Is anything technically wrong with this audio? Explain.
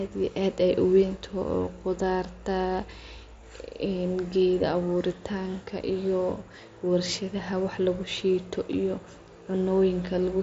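No, the speech is carried over a Bluetooth mSBC headset link working as intended, with the band stopping near 7.7 kHz as that wideband codec does, and there is nothing to flag.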